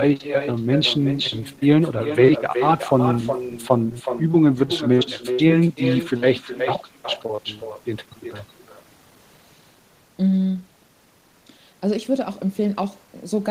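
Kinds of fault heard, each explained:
Echo with no canceller: the far end plays the call through a loudspeaker, its microphone picks it up, and nothing strips that out. So the speech returns after the network round trip, roughly 400 ms later and about 9 dB quieter, a thin copy trailing every phrase throughout.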